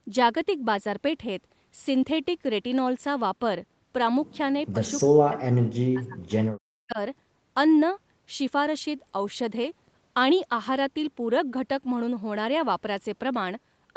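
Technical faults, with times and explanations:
4.72–4.81 s, 5.04–6.4 s, 6.86–6.98 s, speech suppressed in double talk: the voice dips about 10 dB, then cuts out by about 40 dB, likely from the echo canceller clamping down while the far end spoke.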